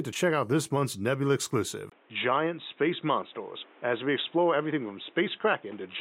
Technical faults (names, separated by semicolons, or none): input switched to a poorer device